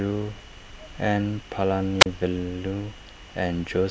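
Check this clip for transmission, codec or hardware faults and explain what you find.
One fault: a wireless microphone squelch dropout from 2.00 to 2.06 s. The FM radio link fades, the receiver's squelch mutes the output, and the speech gives way to a short burst of hiss, about 35 ms of near silence, then returns.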